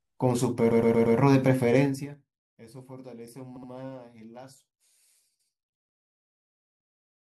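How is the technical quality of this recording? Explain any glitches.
The recording has two kinds of glitch: stuttering from repeated frames in three places, and zipper noise during one level drop.

Repeated frames: a stretch of compressed audio was sent or written again, so the decoder replays it. From 0.70 to 1.16 s a 116 ms block plays four extra times. From 3.55 to 3.69 s a 70 ms block plays twice more. From 5.39 to 5.53 s a 139 ms block plays once more. Each one is heard as a stutter, and together they make the audio about 0.74 s longer.

Zipper noise: from 1.77 to 2.32 s the level falls by roughly 20 dB in unsmoothed 3 dB steps, about ten per second. Each jump puts a small click in the waveform, so a ticking rides on the sound as it fades.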